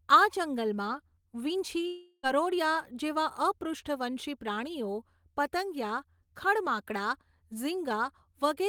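From 1.87 s to 2.26 s the speech turns into a buzzy, fading smear of the last sound for about 0.36 s, then a brief 20 ms silence, and resumes with that stretch missing. The likely cause is a long network dropout concealed by the receiver.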